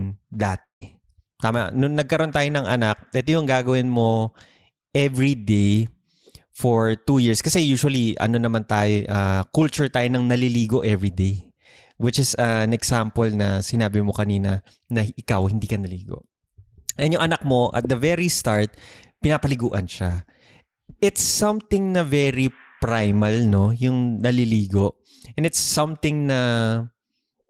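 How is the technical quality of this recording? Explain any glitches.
The recording has several network glitches, all typical of a call over a lossy connection.

From 0.63 to 0.84 s there's what sounds like a long network dropout, likely the stream stalling. About 180 ms never arrives. The receiver stretches the last sound into a fading buzz, then it goes quiet for a moment before the speech picks up again with that chunk missing.

Right at the tail of that gap, 0.81 to 0.83 s, you get a lost packet rebuilt from error correction. The 20 ms frame comes from the low-bitrate backup copy carried in the next packet, so there's no hole, just a rougher, noisier patch.

Near the end, 25.19 to 25.23 s, there's a short concealed packet loss. The decoder papers over the missing 20 ms by extending the previous sound, so you hear a brief smear or wobble rather than a clean gap.

Inside that same spot, 25.20 to 25.22 s, a second 20 ms packet is rebuilt from error correction. 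It sounds rougher and noisier than its surroundings, but nothing drops out.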